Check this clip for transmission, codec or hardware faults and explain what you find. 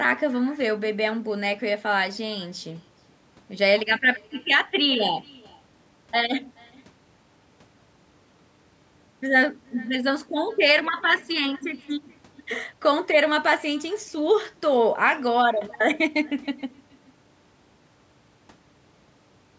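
One fault runs through the whole speech clip: echo with no canceller. The far end's loudspeaker feeds its microphone, returning the talker's voice roughly 0.4 s later, a faint, thinner copy about 28 dB down. The call's microphone processing leaves nothing above 8 kHz.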